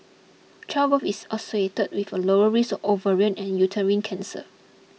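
Nothing goes wrong anywhere in this speech recording; there's no technical fault to point to.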